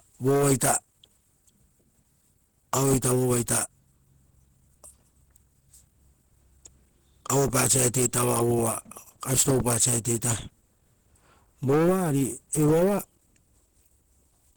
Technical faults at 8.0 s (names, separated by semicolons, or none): Opus compression